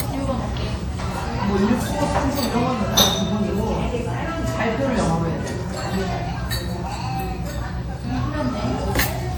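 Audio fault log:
Throughout, WMA compression: the sound carries a plainly audible ringing, washy smear, with a hiss that swells and fades along with the signal and nothing above 20.1 kHz. This is likely a low-rate transform codec, consistent with WMA 1 at around 48 kbps. Its long blocks spread quantisation noise over tens of milliseconds around each event, and faint spectral detail is dropped to zero, leaving the breathing, smeared texture.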